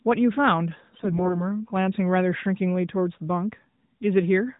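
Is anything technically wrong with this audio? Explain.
Yes. From 0.94 to 1.49 s there's a burst of AMR bit errors. The weaker-protected bits in those frames got flipped, about one in twenty, so the excitation pulses and fine pitch, gain and spectral values land wrong. The speech stays near its pitch and level but goes hoarse, scratchy and gargly. It all sits on the narrowband mobile codec, so nothing above 4 kHz comes through.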